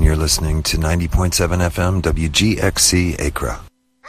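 From start to finish the audio carries MP2 compression damage, and it is plainly audible. The top end sounds dull. Upper bands seem to drop out and return, so the brightness flickers. Beneath that sits a gurgling, granular roughness. The likely cause is MPEG Layer II coding at a low bitrate, around 80 kbps. Its 32 sub-bands were starved of bits. Some upper bands were switched off entirely, and the rest were quantised coarsely.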